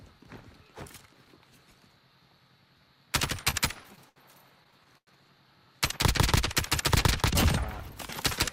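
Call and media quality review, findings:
Dragging, stuttering audio at 3.37–4.19 s (five stalls) and 4.64–5.10 s (four, up to 97 ms). Repeated stalls (stutter): jitter buffer underruns from late packets, bridged by extending the last sound. Nothing lost.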